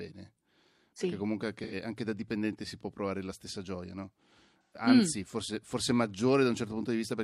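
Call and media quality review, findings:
AAC frame loss with concealment, 1.63–1.74 s, just before "anche da dipendente si", and 4.64–4.81 s, between "la stessa gioia no" and "mm forse forse". Decoder rebuilds missing frames from the last good spectrum. Brief smeared, noisy, phasey patches, consistent with two and three lost frames.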